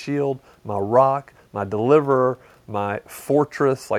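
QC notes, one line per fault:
Nothing in this speech recording needs a QC line, as no faults were found. There is nothing further to log.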